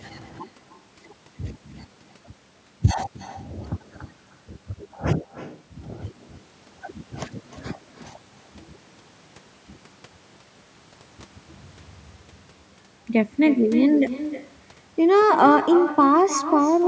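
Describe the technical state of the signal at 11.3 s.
At 11.3 s, like everywhere in the clip, there's echo with no canceller: the far end's speaker feeds their mic, so speech returns about 11 dB quieter, roughly a third of a second late.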